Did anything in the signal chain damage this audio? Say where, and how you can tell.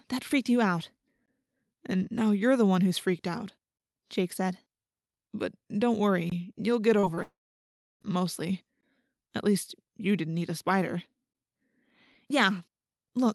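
Yes. There is damage at two stages, the buffer or playback stage and the network.

The gap between chunks sits at the buffer or playback stage. It appears at 1.26–1.28 s, 6.30–6.32 s and 8.81–8.83 s. Each is a 20 ms hole with hard edges. The sound stops dead and resumes exactly where it left off, so nothing is missing. The joins fall where 2.5 s blocks of audio meet. Each block appears to start slightly late, and silence fills the space.

Short concealed packet loss happens on the network. The first loss is at 6.99–7.05 s, where about 40 ms is missing. The second is at 7.15–7.19 s, where about 20 ms is missing. Each one is a brief smear where the sound holds its last shape for a moment and then blends back in. The decoder never got those packets in time. It patched each hole by extending the preceding sound.

The long network dropout runs from 7.23 s to 8.03 s. About 0.78 s of audio never plays. 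At first the sound carries on as a fading buzz or hiss. Then about 0.66 s of near-silence follows, and the audio returns further along without the lost part. The likely cause is a stretch where no packets arrived at all. Concealment can only run briefly before it gives up. The surrounding call audio carries Opus coding texture, with the high end stopping near 12 kHz.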